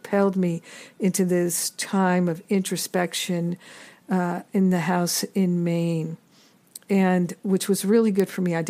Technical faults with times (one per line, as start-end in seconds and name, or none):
8.20 bit error spike